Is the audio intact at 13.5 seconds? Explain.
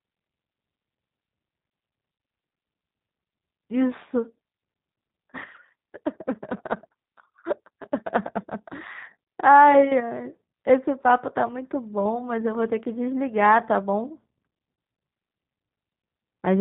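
No, G.729 codec damage runs through the whole clip, including 13.5 s. The speech is rebuilt from a vocal tract filter, a pitch predictor and a few pulses per 5 ms subframe, with nothing above 4 kHz, which fits an 8 kbit/s rate. It sounds plainly rough, synthetic and band-limited.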